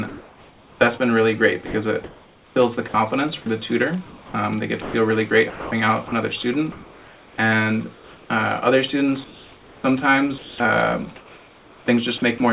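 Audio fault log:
0.08–0.8 s, comfort noise in place of the background: the sender likely stopped transmitting during the pause, and the receiver filled 0.72 s with steady synthetic noise that is featureless and about 1 dB off the real background level, which sits about 29 dB below the loud parts.
1.66–8.3 s, sound chopped by the voice detector: the detector likely switched transmission on and off repeatedly, replacing 2.38 s in total with comfort noise, so quiet edges vanish.
10.38–11.88 s, sound chopped by the voice detector: transmission was likely gated on and off again, with 0.94 s replaced by comfort noise, leaving choppy sound.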